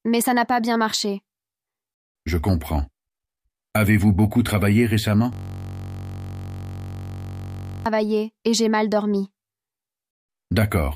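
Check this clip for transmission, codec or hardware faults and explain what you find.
One fault is present: a system hang loop from 5.33 to 7.86 s. The system froze while the audio hardware kept replaying one ring buffer, repeating a 21.33 ms slice, which fits a 1024-sample buffer, well over a hundred times. The result is a steady buzz at about 46.9 Hz.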